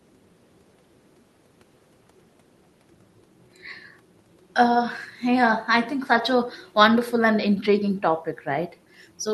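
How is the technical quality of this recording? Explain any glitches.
Listening through the speech, nothing stood out as a glitch or technical fault.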